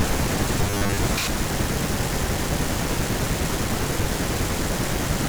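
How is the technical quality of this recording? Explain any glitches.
The recording has one glitch. From 0.61 to 0.97 s, the speech turns into robotic sound from repeated short buffers. It is a rigid, metallic buzz near 100 Hz. The likely cause is audio arriving too seldom, so a 10 ms slice repeats and most real sound is skipped.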